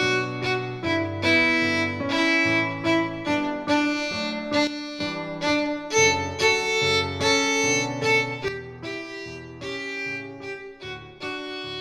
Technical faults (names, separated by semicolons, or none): sudden gain jump